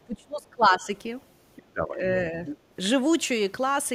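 From 0.06 to 0.9 s, the talker's speech dips hard, by about 25 dB at its deepest. This is speech suppressed in double talk. The echo canceller likely mistook the overlap for echo and turned everything down.

From 1.56 to 1.63 s, a faint scrap of the other side's voice leaks through, well below the talker. Leftover loudspeaker echo likely escaped cancellation.

From 1.64 to 2.02 s, speech is suppressed again, dipping by about 25 dB. Double talk likely triggered the same gain cut.

From 2.45 to 2.57 s, the other side's voice leaks through more strongly, only about 10 dB under the speech. Uncancelled echo is likely the cause.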